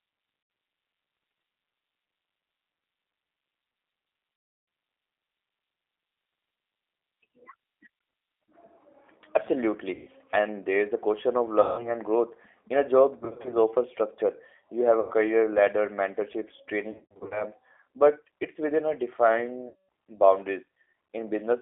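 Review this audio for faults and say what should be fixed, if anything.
The whole call runs through a G.729 codec at 8 kbit/s, so the sound is squeezed into a 300 Hz to 3.5 kHz band and rebuilt from pitch and filter parameters, leaving it rough and slightly synthetic. A wider-band codec such as Opus or G.722 would avoid this.

There's VoIP packet loss concealed by the speech codec at 0.43, 4.36, 9.94, 11.61, 13.19, 15.00, 16.91 and 19.68 s. The decoder stretches the last pitch into a fading buzz, including across the longest gap of 320 ms at 4.36 s, and the losses near 13.19 and 16.91 s are scattered bursts. Fixing the network path or adding FEC and a deeper jitter buffer would prevent it.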